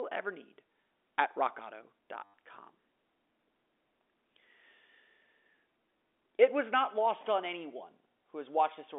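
Packet loss with last packet repeated hits this speech recording between 2.24 and 2.34 s: for about 100 ms the receiver had nothing new and kept replaying the last packet it got. Each repeat restarts out of step with the pitch, so the run forms a brief robotic stutter buzzing near 100 Hz, which fits 10 ms packets. Around it, the narrow 300 to 3600 Hz telephone band of G.711 coding can be heard.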